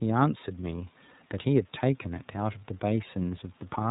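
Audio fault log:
throughout: iLBC codec. Plainly rough, synthetic speech from independently coded 30 ms frames, fitting the 13.33 kbps mode; the spectrogram shows nothing above 4 kHz.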